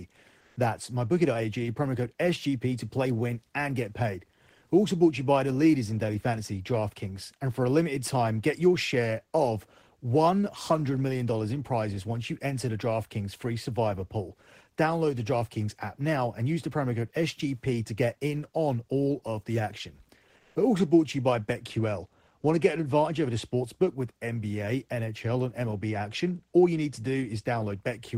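Comfort noise in place of the background shows up twice in this speech, from 0.40 to 0.56 s and again from 20.36 to 20.55 s. For about 160 ms and then 190 ms, the real room tone drops out and a flat, featureless hiss stands in. The first patch is about 5 dB louder than the background around it, while the second is only about 1 dB quieter. The likely cause is discontinuous transmission in the encoder, probably Opus DTX.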